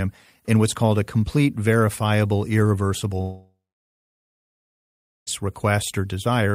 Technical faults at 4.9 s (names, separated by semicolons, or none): long network dropout